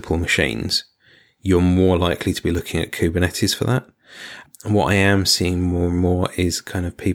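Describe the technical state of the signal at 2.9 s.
At 2.9 s the speech signal is intact, with no audible fault at that moment.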